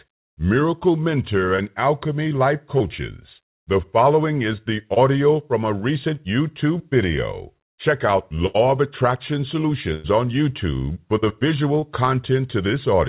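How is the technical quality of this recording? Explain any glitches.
The speech has six packet-loss glitches, heard over a narrowband call sound with nothing above 4 kHz, which fits a 64 kbps G.711 mu-law telephone codec.

Short concealed packet loss occurs at 1.56–1.60, 2.78–2.82, 4.94–4.98 and 11.80–11.84 s. Each time, about 20 ms of audio arrived too late, and the receiver extended the preceding sound to bridge it. The result is a brief smear or wobble.

Bursts of packet loss hit at 8.46–8.56 and 9.94–10.06 s, removing about 80 and 100 ms. The receiver stretched the last sound while fading it, giving a held buzz or dying hiss before speech resumes with a chunk missing.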